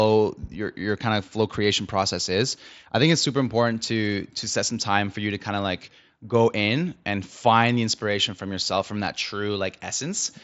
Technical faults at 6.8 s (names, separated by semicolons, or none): none